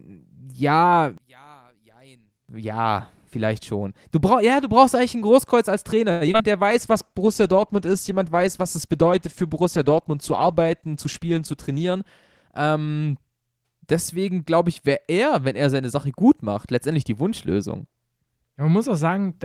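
One channel inverted, 1.18 to 2.49 s: the sound drops by about 29 dB and turns faint, likely because one stereo channel has reversed polarity and cancels the shared centre when summed to mono.

Repeated packet loss (robotic sound), 6.11 to 6.45 s: five short gaps, the longest 94 ms, are patched by stretching the preceding sound. Nearly half the stretch becomes choppy filler.

Jitter buffer slow-down, 6.48 to 7.26 s: the receiver repeats pitch periods to rebuild its reserve. The sound plays at 93% speed, adding 63 ms and drawing syllables out at unchanged pitch.

Call bitrate drop, 6.71 to 12.57 s: the encoder is pushed to much coarser coding. The rough, watery and duller tone points to a fall from about 32 kbps to 13 kbps.

Jitter buffer speed-up, 11.07 to 12.49 s: the receiver trims short pitch-period pieces to cut excess delay. The sound runs at 108% speed and loses roughly 150 ms, so it sounds hurried at normal pitch.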